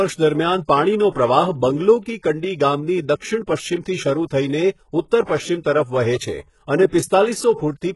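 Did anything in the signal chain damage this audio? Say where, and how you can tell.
Yes, in the codec stage. The treble of this speech sounds gritty and synthetic, with lispy s sounds and nothing above 11.5 kHz. That points to HE-AAC compression at a very low bitrate, likely around 12 kbps. It codes only the lower band and rebuilds the top by copying lower bands upward, so the harmonics don't line up.

Also in the codec, there is pre-echo. A short hiss leads the attacks at 1.10 s, just after "દરમિયાન પાણીનો", spreading about 56 ms, and at 5.24 s, spreading about 49 ms, smearing both onsets. Quantisation noise sized for each loud attack fills the quiet moment before it within the same transform block.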